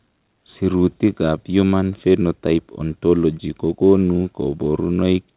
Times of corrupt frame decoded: none

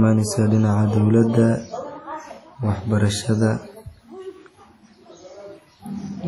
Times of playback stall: none

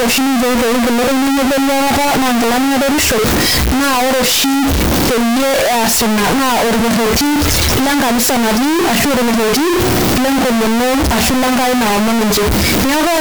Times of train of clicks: none

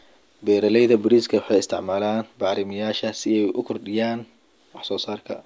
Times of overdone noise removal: none

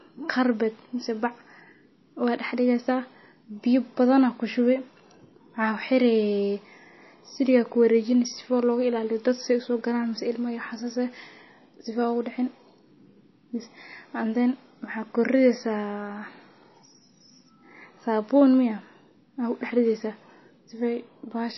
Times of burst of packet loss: none

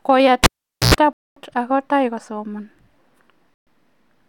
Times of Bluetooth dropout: 1.13-1.38, 3.54-3.68

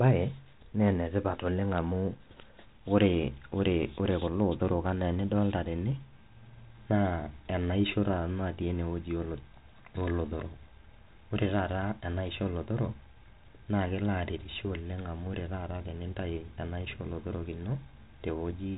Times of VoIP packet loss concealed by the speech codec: none

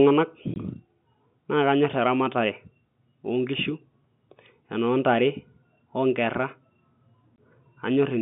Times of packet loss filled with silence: 0.54-0.56, 7.36

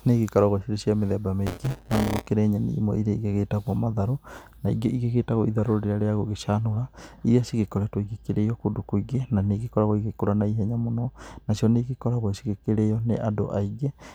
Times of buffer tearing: 1.46-2.27

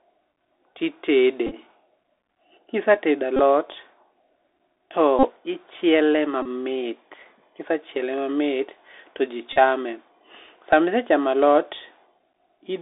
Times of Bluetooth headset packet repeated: 1.47-1.55, 3.36-3.40, 5.19-5.28, 6.42-6.47, 9.53-9.56, 12.22

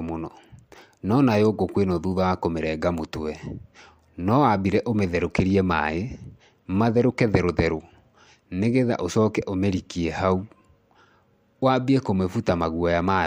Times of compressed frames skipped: 5.79

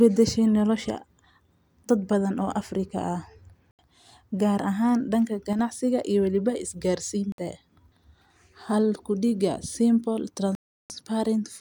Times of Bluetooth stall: 3.71-3.79, 7.32-7.38, 10.55-10.90

